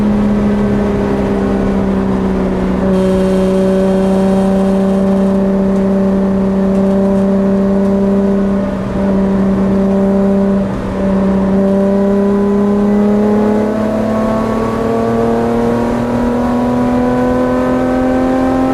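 Nothing stood out on listening to this recording.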